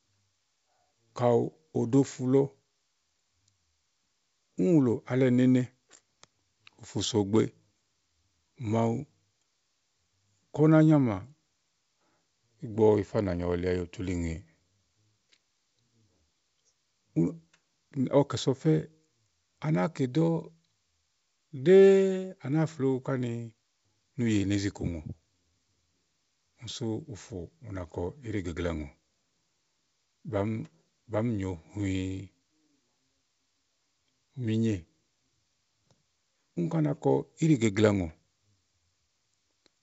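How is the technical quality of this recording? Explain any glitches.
No glitches to speak of here: the speech comes through G.722 wideband telephone coding at 64 kbit/s, so it stays clear up to around 7 kHz with at most a faint hiss in the upper band, and nothing else needs explaining.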